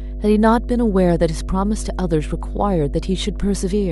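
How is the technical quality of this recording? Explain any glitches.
The technical quality is poor. Mains hum runs through the whole speech recording. It is a steady low tone at 50 Hz with some low harmonics. A ground loop or nearby transformer leaks the power line into the signal. The hum sits only a few decibels below the speech.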